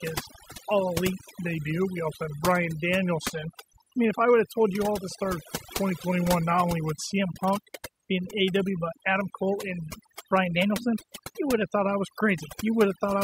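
From the first second to the last there's overdone noise removal. The denoiser was pushed hard enough that it shuts down individual frequency bands whenever they sit near its noise estimate, and the quieter parts of the speech get caught along with the hiss. So the gaps drop to near silence with little twinkling specks.

On top of that there are three jumps in speed and pitch. The likely cause is a drift correction step, where clock-matching software changed the playback rate in a single move to keep its buffer in range. Right after "his all elite", from 1.29 to 3.30 s, the audio slows by 6.3% and drops about 113 cents, just over a semitone, then snaps back. The same drop happens after "you all at the", from 5.09 to 7.19 s. From 10.56 to 11.62 s it goes the other way, 6.3% faster and about 106 cents sharp, and it snaps back just before "thought I was".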